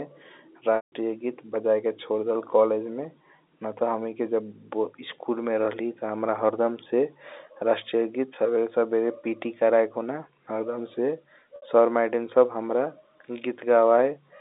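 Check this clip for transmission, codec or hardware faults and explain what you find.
Two dropouts mar the clip, both packet loss with pitch repetition, heard over the telephone-band G.711 mu-law line (about 250 Hz to 3.7 kHz).

At 0.76 s the sound freezes into a held, buzzy tone that fades to silence, lasting 160 ms. At 11.56 s a shorter 60 ms buzzy hold appears. The receiver lost packets and repeated the last pitch period to fill the gap, fading it over about 50 ms. The 160 ms gap fits eight 20 ms packets.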